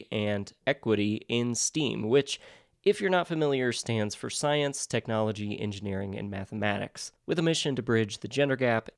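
No technical faults can be heard anywhere in the audio; the signal holds steady and intact throughout.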